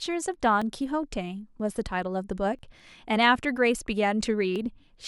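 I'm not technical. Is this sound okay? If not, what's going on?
No. Periodic USB or driver dropouts: something briefly blocks the audio connection about once a second, from 0.62 to 4.56 s, skipping roughly a hundredth of a second of speech each time, heard as regular ticks.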